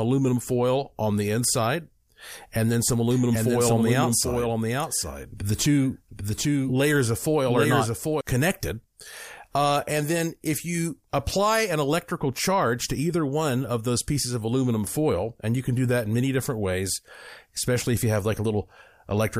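Right after "and then some", from 3.11 to 8.21 s, there's a doubled audio track: a dry copy trails about 0.7 s behind, a few dB quieter, likely from a second, slower capture path.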